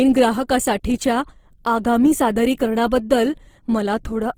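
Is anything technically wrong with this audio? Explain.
Yes, across the whole speech clip there's plainly audible Opus compression damage, likely from a low bitrate around 16 kbps in CELT mode. The encoder fills starved bands with folded or noise content, so the voice comes across grainy and rough rather than swirly.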